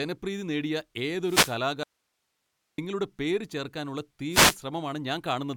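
A fading radio link from an analogue FM wireless microphone causes a wireless microphone noise hit from 1.22 to 1.58 s. As the received signal weakens, receiver noise swells over the speech as a brief swish of static. This happens again from 4.31 to 4.57 s, right after "പേര് ചേർക്കാനുള്ള".

Between these, from 1.83 to 2.78 s, the speech cuts out abruptly for about 0.95 s, an audio dropout to a faint residue. The likely cause is a lost signal while the downstream path stayed live, so only hiss about 50 dB down fills the gap before "പേര് ചേർക്കാനുള്ള" returns.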